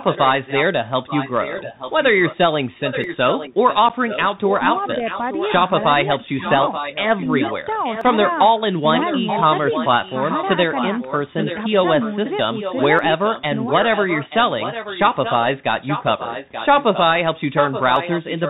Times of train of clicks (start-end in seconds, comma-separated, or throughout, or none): none